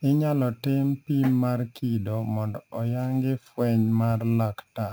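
Throughout the speech, imaging from sample-and-hold upsampling adds a bright metallic fizz about 29 dB below the speech, tracking its level. Held samples point to a 16 kHz source raised to 44.1 kHz unfiltered. A spectrogram shows an inverted mirror copy filling 8 to 16 kHz, and the waveform shows stair steps.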